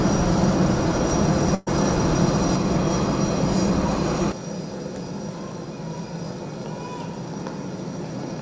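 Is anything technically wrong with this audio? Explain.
Yes: there is a burst of packet loss from 1.54 to 1.69 s. The receiver concealed a gap of about 120 ms by continuing the last sound while fading it, then resumed with 120 ms of audio missing. On a spectrogram, the preceding spectral pattern is smeared flat and dims toward the jump. In the waveform, an envelope decays and then cuts to unrelated material. The call path's band limit shows as nothing above 8 kHz, which fits a G.722 codec at 64 kbps.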